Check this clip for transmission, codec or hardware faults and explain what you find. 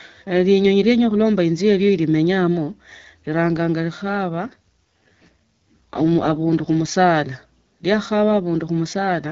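One transmission fault is present: a single AMR rate drop in the middle of the speech.

AMR rate drop, from 4.46 to 6.92 s. The link appears to weaken, so the network pushes the wideband AMR codec into a lower mode and spends the freed bits on error protection. The roughness fits a step down from the 12.65 kbit/s mode to about 6.6 kbit/s. The bandwidth holds and nothing drops out, but for those two and a half seconds the speech turns raspy and synthetic, then clears when the higher rate returns. Outside that stretch, the AMR-WB coding at 12.65 kbit/s leaves only light codec damage.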